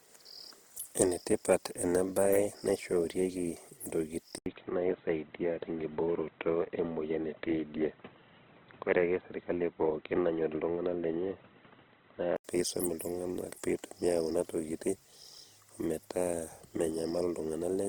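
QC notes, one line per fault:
Throughout: Opus compression. The band reaches 20.1 kHz, but the speech sounds rough and grainy rather than swirly, with noise filling bands where detail is missing. This points to the music (CELT) mode at a low bitrate, around 16 kbps, as the likely cause.
4.38 to 12.45 s: input switched to a poorer device. After an 80 ms silence, the sound narrows to nothing above 3.8 kHz and turns dull and boxy, with a new noise floor well below the speech and loudness about unchanged. The cause is likely a change to a narrower-band microphone.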